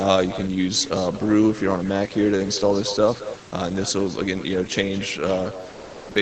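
From the start and all the way through, every syllable is trailed by a fainter, thinner copy arriving roughly a fifth of a second later, at about 14 dB below the direct speech. This is echo with no canceller: the far end's loudspeaker output leaks into its microphone and is sent straight back, so the talker's own speech returns after the round trip with nothing subtracting it. The echo is band-limited like the rest of the call audio, which stops near 8 kHz.

At 3.49 s there is a tiny hole in the speech, with roughly 10 ms of real sound replaced by a brief patch of steady noise before the speech picks up again. This is sound dropped by the voice detector. The sender's detector most likely mistook a quiet moment in the speech for background and briefly stopped transmitting, so the receiver filled the gap with synthetic noise until the detector triggered again.

From 5.69 to 6.15 s, near the end of the clip, the natural room background gives way to a smooth, featureless hiss at the same level, with none of the real room's texture. 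This is comfort noise in place of the background. With no speech present, the sender likely switched to discontinuous transmission and sent only occasional updates, and the receiver generated noise roughly matching the background's shape to fill the pause.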